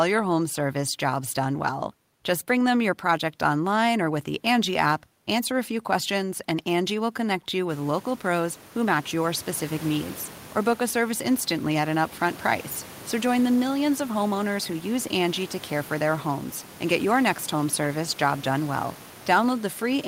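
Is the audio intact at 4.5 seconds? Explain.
Yes, the speech at 4.5 seconds is intact, with no dropout, distortion or other fault at that moment.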